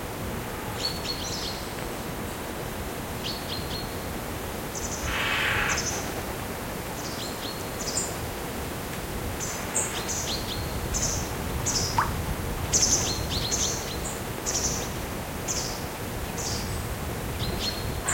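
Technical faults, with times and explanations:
1.83–1.95 s, loud pop: two sharp pops, roughly 15 dB above the sound, which continues underneath. A sudden voltage pulse, likely from a plug or switch, hit the signal.
11.10–11.12 s, loud pop: a single short pop about 10 dB over the sound. A brief electrical spike, likely static or a driver glitch, was added and shaped by the following circuitry.
14.38–14.53 s, loud pop: a quick double pop about 10 dB above the ongoing sound, likely a voltage step from a switch or connector.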